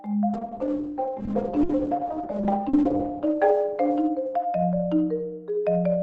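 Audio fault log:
0.34–6.02 s call bitrate drop: the top end narrows from 20 kHz to 8 kHz and the sound turns rough and watery, worst for about 2.5 s. This fits an encoder starved from roughly 128 kbps to near 9 kbps. Unlike a plain low-pass filter, coarse grain accompanies the muffling.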